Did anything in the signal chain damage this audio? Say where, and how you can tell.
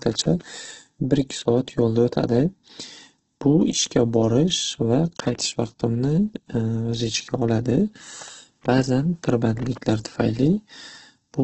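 Yes. At the codec stage, heavy Opus compression, likely at a very low rate around 12 kbps, damages the speech throughout. Nothing survives above 8.4 kHz, and the encoder fills starved bands with folded or noise-like energy, so voiced sounds come out rough and grainy.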